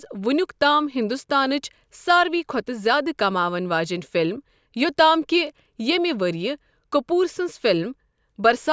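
Nothing in the speech recording points to a technical fault in the signal path.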